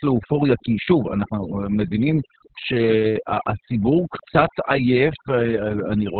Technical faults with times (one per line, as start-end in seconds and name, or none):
0.00-6.19 overdone noise removal
0.00-6.19 Opus voice compression